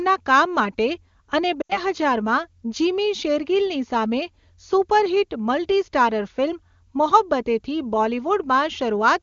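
Lost AMR speech frames at 1.61 to 1.80 s, just after "કામ માટે અને", break up this speech clip. The decoder had no valid data for about 80 ms, which fits four consecutive 20 ms frames failing their check. It filled the gap by repeating the last good pitch and vocal tract settings at falling gain. In this wideband AMR-WB stream, running at 23.85 kbit/s with little codec damage, that concealment fades quickly toward silence, and the voice returns weak and rough for a moment.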